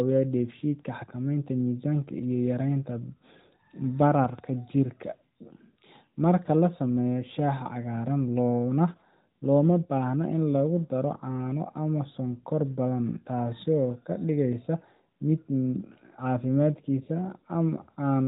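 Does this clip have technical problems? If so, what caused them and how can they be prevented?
Yes: a loud pop, two sharp thumps between 4.24 and 4.41 s, roughly 10 dB above the speech, which continues underneath rather than dropping out. The likely cause is a voltage pulse from a plug, switch or static discharge; securing connections and grounding equipment prevents it. The narrowband mobile-codec bandwidth is heard throughout.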